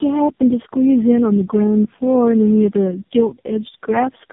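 Throughout, tandem speech coding leaves the speech rough, warbly and muffled, with nothing above 3.7 kHz. The stacked artefacts, worse than any single codec, point to roughly three low-rate coders in a row.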